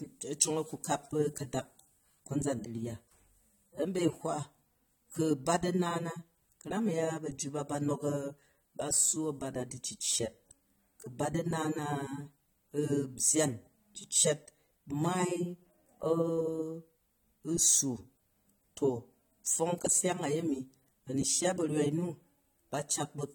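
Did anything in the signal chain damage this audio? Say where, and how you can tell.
Yes, at the codec stage, throughout the speech: AAC compression is the likely cause. The sound is dull and smeared, with fizzy, warbling sibilants and nothing above 19 kHz. That fits AAC-LC near 32 kbps, where coarse quantisation leaves spectral holes and substitute noise.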